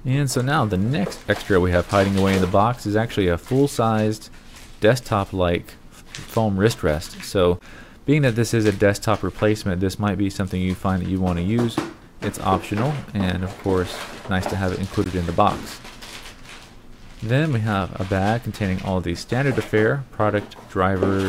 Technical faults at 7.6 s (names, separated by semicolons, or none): Bluetooth dropout